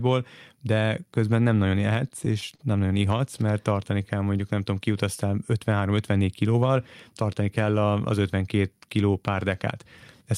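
Repeated stalls (stutter) run from 1.93 to 2.61 s, right after "de közben nem nagyon" and before "nem nagyon". Late-arriving packets emptied the jitter buffer five times, and the receiver stretched the preceding sound to cover each gap. That adds about 73 ms in total, with the longest stall at 33 ms. Nothing drops out, but the speech halts and stumbles.

A jitter buffer slow-down follows from 3.75 to 4.55 s, ending just before "tudom kiutaztál". To rebuild its reserve, the receiver repeated short pitch periods, adding 60 ms. The speech plays at 94% speed with unchanged pitch, so syllables sound slightly drawn out.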